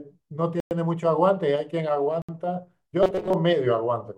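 At 0.60 s the speech drops into dead silence for about 108 ms, resuming at 0.71 s, and again at 2.22 s for about 67 ms, resuming at 2.29 s. These are Bluetooth stalls. The gaps are clean cuts rather than fades, which points to the headphones' playback buffer running empty, likely because radio interference delayed packets until retransmissions arrived, so playback simply paused and then carried on.

From 3.03 s to 3.33 s the speech turns into a rigid, metallic buzz at 188 Hz that still loosely tracks the speech: robotic sound from repeated short buffers. With fresh audio arriving too rarely, the player likely kept looping its last tiny fragment, roughly 5.3 ms long, which sets that fixed 188 Hz pitch. Most of the real audio in that stretch, around two thirds or more, was skipped and replaced by these repeats.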